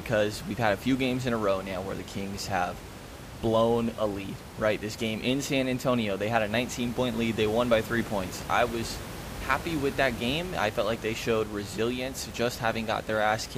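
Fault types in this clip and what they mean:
No faults detected.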